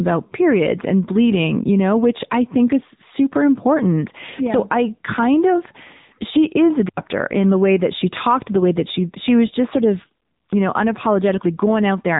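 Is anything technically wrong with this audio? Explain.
Yes. Throughout, the speech carries AMR narrowband mobile codec damage. The codec drives a vocal tract model with a pitch predictor and sparse pulses, and the plainly buzzy, synthetic quality points to a low rate near 8 kbps. Nothing above 3.8 kHz survives, leaving a muffled, telephone-band sound.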